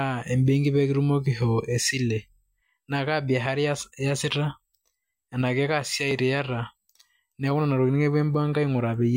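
The clip is speech with two brief discontinuities, at 4.22 s and 6.11 s. Each is a jump where the sound skips forward with no gap of silence, as if a sliver of a few milliseconds had been cut out and the edges butted together. The likely cause is a dropped buffer (overrun): the capture software fell behind, the hardware overwrote samples before they were read, and that short stretch was lost outright.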